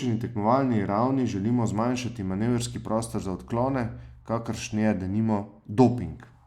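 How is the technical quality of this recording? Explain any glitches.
No technical glitches can be heard anywhere in the recording; the speech signal comes through intact, with no interruptions or defects.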